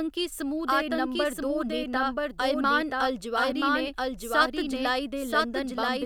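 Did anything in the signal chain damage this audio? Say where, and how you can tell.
Yes, a doubled audio track: the speech has a second, equally loud, dry copy trailing about a second behind throughout, likely from a slower second capture path or a misaligned edit.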